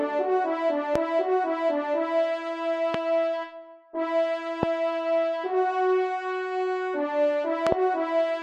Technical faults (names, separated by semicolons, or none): loud pop